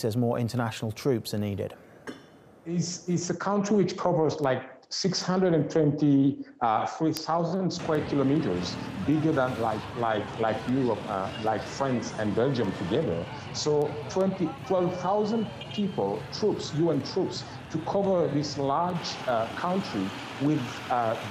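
From 0.14 s to 21.25 s, word clock ticks recur roughly every 0.4 s: the receiving device runs unlocked to the sender's clock, drifting by about 50 ppm, so each slip drops or repeats one sample, producing sharp clicks of uneven strength.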